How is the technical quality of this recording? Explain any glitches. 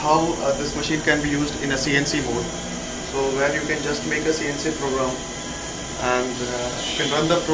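No glitches can be heard anywhere in the recording, and the signal stays technically intact throughout.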